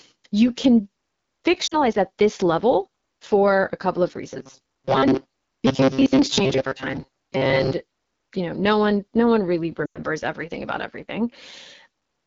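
The whole clip carries the rough, raspy texture of the AMR wideband (HD Voice) codec at one of its lowest modes, which fits 8.85 kbit/s. The pulse-driven vocal tract model is starved of bits, so the grain stays constant rather than coming and going like the faults below.

At 1.67 to 1.76 s, just before "at this level for", lost AMR speech frames cut out about 40 ms. The decoder stretches the last good sound while its gain falls, giving a brief warble and dip rather than a steady buzz.

From 4.31 to 7.73 s, after "for a couple of", the sound turns into a rigid metallic buzz at 133 Hz. That pitch likely comes from repeated short buffers of about 7.5 ms replacing most of the real audio. Unlike frame loss, it holds that fixed pitch instead of fading.

At 9.85 to 10.01 s, between "one no one really" and "everything about", about 100 ms of lost frames drop to near silence within two frames, and "everything about" returns weak or rough.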